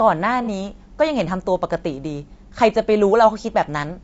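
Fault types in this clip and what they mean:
Low-delay AAC compression, throughout: the speech sounds rough and grainy, with noise filling the gaps between harmonics and a thin, synthetic top band, likely from AAC-ELD's short frames resolving pitch poorly at a rate that fits about 32 kbps.
AAC frame loss with concealment, 0.44 to 0.49 s: a brief smeared, noisy patch where the decoder rebuilt a missing stretch, consistent with one lost frame of about 30 ms, from the last good spectrum rather than leaving a hard gap.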